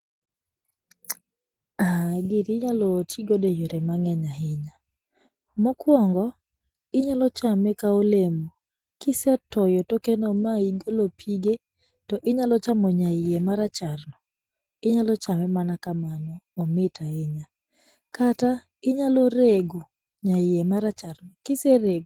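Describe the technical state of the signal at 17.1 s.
At 17.1 s the speech carries Opus voice compression, as it does throughout. The hybrid coding sounds starved, which fits roughly 16 kbps, leaving it plainly hoarse and slightly robotic.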